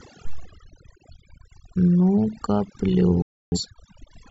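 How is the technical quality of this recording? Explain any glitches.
The recording has two faults: heavy processing throughout and one brief loss of signal.

Overdone noise removal runs throughout. An aggressive noise reducer gates weak frequency bands, leaving twinkling specks and a patchy, holed spectrogram.

A digital broadcast dropout occurs from 3.22 to 3.58 s. The receiver muted after losing frames, roughly seven by the sound, leaving a flat silent gap in the waveform.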